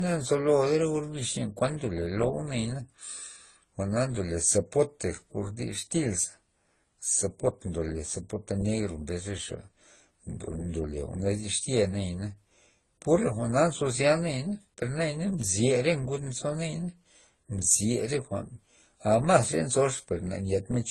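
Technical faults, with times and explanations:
Throughout, transcoding between lossy codecs: nothing reaches above 12 kHz, and the artefacts of two codecs are heard together. This is likely a low-bitrate AAC-LC encode re-encoded to Opus, with the second codec spending bits re-coding the first codec's artefacts.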